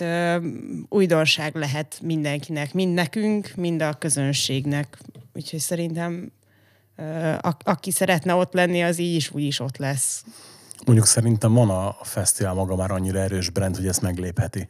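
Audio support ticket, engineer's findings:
Dropped buffer (overrun) at 3.59 s (between "lehet mindenkinek mind nekünk" and "a közönségnek"), 6.11 s and 8.73 s (between "a aki szeretne ott" and "az így is úgy"). Small forward jump, no gap; roughly 5 ms missing each time. Likely capture path not reading its buffer before the hardware overwrote it.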